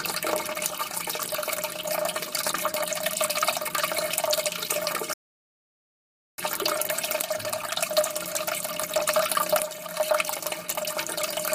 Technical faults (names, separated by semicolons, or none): rebuffering stall